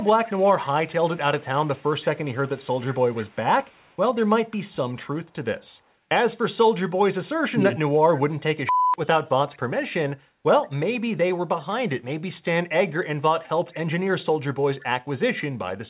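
From 0 to 0.43 s and again at 1.4–2.17 s, a faint copy of the speech trails about 171 ms behind. That's an echo leak, likely from a speakerphone whose echo canceller let some of its own playback slip back. At 2.33–2.49 s the talker dips sharply for a moment: speech suppressed in double talk, likely the canceller ducking everything while both sides overlap. The echo returns at 2.58–3.96 s, the talker dips again at 7.52–7.79 s, and brief faint echoes turn up at 9.53–9.59 s and 13.43–13.74 s.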